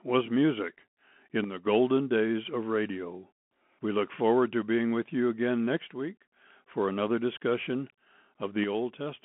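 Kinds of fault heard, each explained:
Bluetooth CVSD headset codec: one-bit delta coding confines the speech to about 200 Hz to 3.4 kHz, nothing above 3.8 kHz, with plainly audible scratchy sibilants and granular hiss, consistent with a 64 kbps link.
One channel drops out: from 8.64 s to the end, the level falls abruptly by about 6 dB, likely because one stereo channel was lost before the mono sum.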